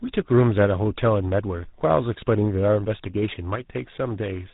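Throughout this speech clip, tandem speech coding leaves the voice rough, muffled and warbly. The sound points to two lossy speech codecs in a row, likely a 24 kbit/s ADPCM stage and then GSM full rate, the second re-coding the first's damage. A spectrogram shows nothing above 3.8 kHz and smeared, blotchy harmonics.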